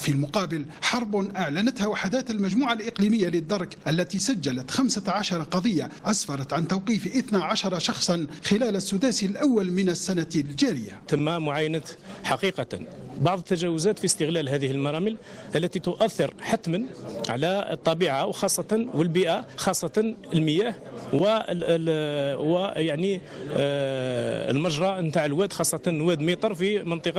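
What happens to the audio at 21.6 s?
A brief smear or wobble passes at 21.57 to 21.61 s, a short concealed packet loss. About 20 ms of audio arrived too late to decode, and the receiver papered over roughly 17 ms of that gap by extending the preceding sound before blending back into the real signal.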